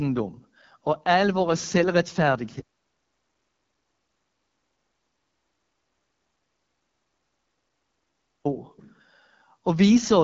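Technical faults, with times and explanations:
throughout: AMR wideband (HD Voice) codec. The speech has a rough, raspy, buzzy texture, and the codec damage is plainly audible. There is no content above about 7.4 kHz. This sound fits AMR-WB running at one of its two lowest rates, consistent with the 8.85 kbit/s mode. Below 6.4 kHz the encoder models the voice as a pulse-excited vocal tract, and at this rate the coarse excitation grates audibly. The top band up to 7 kHz is filled with synthetic shaped noise rather than real signal.
2.60 to 8.45 s: audio dropout to silence. The speech cuts off mid-flow and resumes abruptly after about 5.85 s. The gap is silent, with no room tone or noise floor, so the recording chain kept writing silence rather than capturing a quiet room. The likely cause is that the input was lost during this period through a disconnected device, a failed link or an accidental mute. 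Whatever was said during those seconds is unrecoverable.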